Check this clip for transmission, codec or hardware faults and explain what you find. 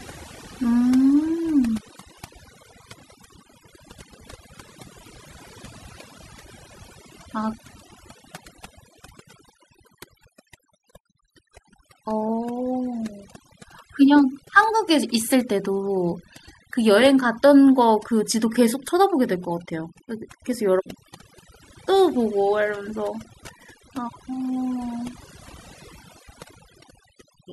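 One fault runs through the whole speech clip: overdone noise removal. A noise reducer set far too aggressively shuts down individual frequency bands whenever they sit near its noise estimate, taking quiet parts of the voice with them. In the pauses the background drops and breaks up into twinkling specks.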